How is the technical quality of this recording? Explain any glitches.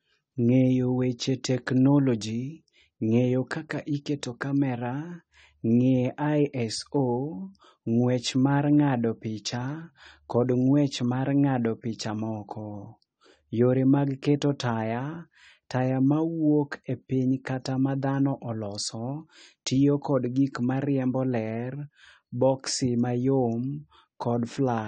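Technical quality is limited by plainly audible low-bitrate coding damage that runs through the whole recording.

AAC compression, likely AAC-LC at a low rate around 32 kbps, affects the speech from start to finish. The encoder quantises each frame's spectrum coarsely to fit the bit budget and discards everything above 9 kHz. The result is dull, band-limited speech with a smeared, warbling texture on sustained vowels and a fizzy, unstable quality on sibilants.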